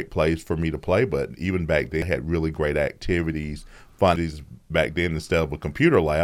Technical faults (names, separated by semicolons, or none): damaged data in a compressed stream